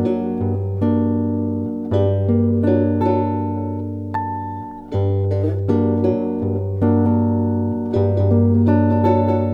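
From 6.82 s to the end, a doubled audio track appears: a second full-band copy trails about 200 ms behind, roughly 5 dB quieter, likely from a slower second capture path.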